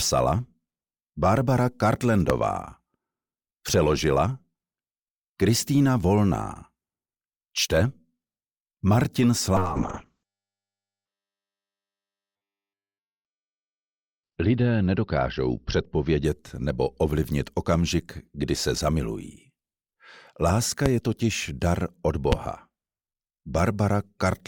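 At 2.30 s a loud pop lasting about 25 ms jumps roughly 20 dB above the surrounding audio, likely from a plug, switch or static discharge injecting a voltage step. The sound continues underneath. On the waveform it is a tall, narrow spike, and on a spectrogram it is a thin vertical stripe spanning all frequencies.

From 9.57 s to 16.80 s a call bitrate drop makes the audio turn rough and watery as the encoder codes it far more coarsely. The drop in quality points to a fall from around 96 kbps to around 6 kbps. The high-frequency cut-off also falls from 20 kHz to 4 kHz, so the sound becomes muffled, especially during the worst 2.42 s stretch. On a spectrogram everything above 4 kHz goes dark, leaving a hard horizontal ceiling, with smeared, blocky texture below it.

Two more loud pops, each about 25 ms long and roughly 20 dB above the surrounding sound, occur at 20.86 s and 22.32 s. They have the same sharp, thumping character and the same spike-and-stripe appearance on the waveform and spectrogram.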